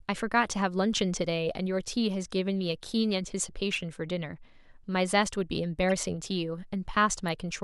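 At 3.73 to 3.76 s and again at 5.89 to 5.92 s, a corrupt frame decoded breaks into the speech as a short chirpy blip. In each spot a couple of damaged compressed frames were played despite flipped bits, so misread gains and codes put energy at the wrong frequencies. A spectrogram shows brief vertical smears unrelated to the harmonics, and the waveform shows spikes, the first peaking near -15 dBFS, the second near -20 dBFS.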